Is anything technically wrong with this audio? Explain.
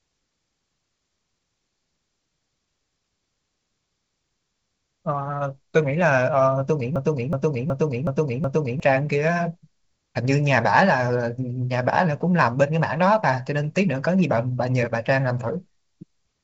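Yes, there is a broken-record loop. From 6.96 to 8.80 s, a 0.37 s fragment repeats exactly, five times. The stream likely stalled and replayed its last buffer. The speech meant for that span is lost.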